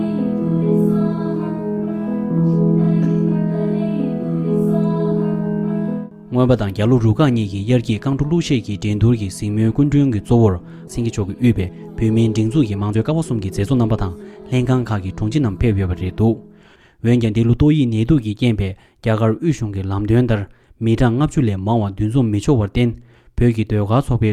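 At 10.87 s the audio makes a skip ahead: roughly a second of material is dropped and the two sides are butted together with no fill. On a spectrogram this shows as an abrupt vertical seam where the texture changes instantly, with no silence between. Right after, a jitter buffer speed-up compresses 10.99 to 11.83 s to 108% speed, and 12.62 to 14.33 s to 118%, trimming small pitch-period chunks so the sound hurries without changing pitch. Harmonics stay level while events crowd closer together, shaving off about 70 ms and then about 300 ms.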